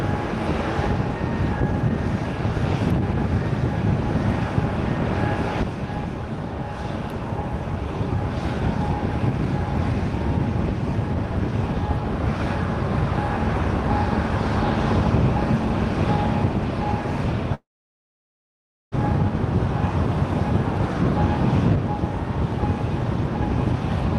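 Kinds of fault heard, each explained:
Long network dropout: at 17.54 s a brief fading buzz gives way to about 1.3 s of flat waveform and blank spectrogram, likely lost packets.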